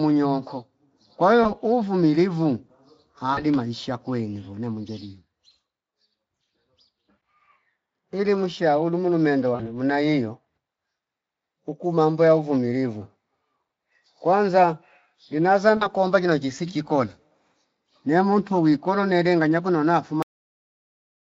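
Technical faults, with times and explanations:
1.43–1.54 s, 3.33–3.45 s, 9.55–9.69 s and 15.77–15.89 s, VoIP packet loss concealed by the speech codec: speech packets went missing, about 20 ms worth right after "nyonko kwa" and roughly 40 ms in each of the other three, including the one between "mushaulu mulu mende" and "muna hiyo". The decoder filled each gap by repeating its last pitch and spectral shape at falling gain, so the speech smears into a brief buzzy tone or coloured noise that fades. Because each decoded frame depends on the previous one, the voice stays thin for a short while after real packets resume, stretching each disturbance to about 110–140 ms.
20.23 s, cut-off end: the final stretch of audio was never written out or played, so the recording stops in the middle of a sound just after "kolo nele nganya konona". There is no decay or tail. The signal drops straight to digital silence and stays there to the end, which sounds like an abrupt chop. 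The Speex coding at 34 kbps leaves the surrounding speech clear.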